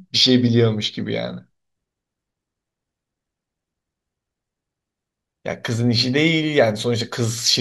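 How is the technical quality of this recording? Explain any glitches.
Nothing in this recording stood out as a problem on listening.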